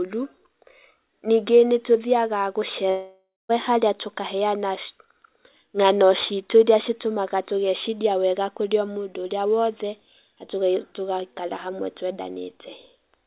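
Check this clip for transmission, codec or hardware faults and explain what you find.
One fault stands out: a long network dropout. From 2.9 s to 3.51 s the speech breaks off. The last sound is drawn out into a buzzy fill that fades, and the final 0.21 s is near silence. Speech then resumes with 0.6 s of it missing. The likely cause is a run of packets that never arrived, so the receiver repeated old audio until it gave up. The whole clip stops at 4 kHz, as a G.711 call path would.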